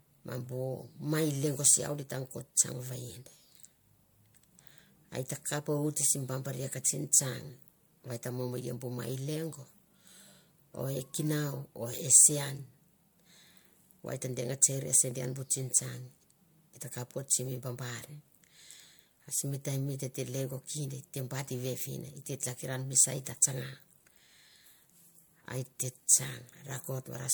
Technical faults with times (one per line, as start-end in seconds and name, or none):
0.00-27.33 generation loss